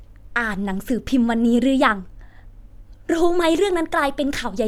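No technical faults are audible.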